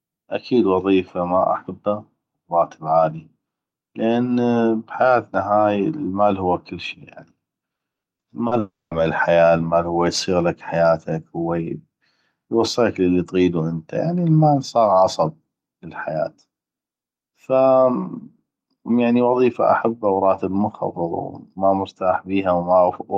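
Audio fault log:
7.75–8.54 s, repeated packet loss (robotic sound): four separate holes, the longest 120 ms, are each patched by stretching the preceding sound. That covers 240 ms, about 30% of this stretch, so the speech turns choppy with pieces missing.
8.59–8.94 s, long network dropout: the sound is carried on as a fading buzz or hiss, then about 200 ms of silence follows before speech returns at "الحياة المال هو يصيغلك". This gap, with 320 ms never played, is likely from audio not arriving over the network.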